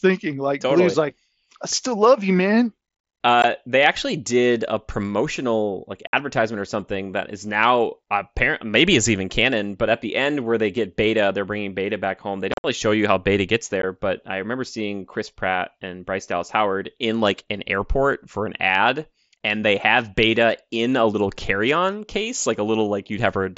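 Abrupt holes at 3.42 s, 6.07 to 6.13 s, a chopped stretch from 12.52 to 12.64 s and 13.82 s: unconcealed Bluetooth headset packet loss over the mSBC link, with lost packets replaced by silence or an idle pattern.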